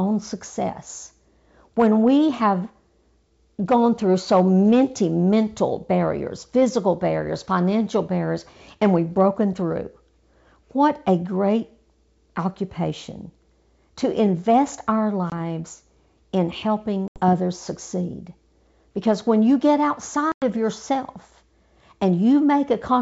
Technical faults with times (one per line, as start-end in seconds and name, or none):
15.30-15.33 packet loss on an ADPCM call
17.08-17.20 packet loss on an ADPCM call
20.32-20.43 packet loss on an ADPCM call